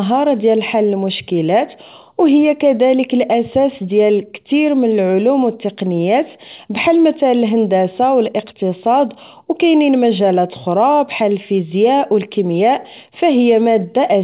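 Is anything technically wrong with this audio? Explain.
No, the speech sits on an ordinary mu-law G.711 telephone channel at 8,000 samples a second, and nothing in the signal goes wrong.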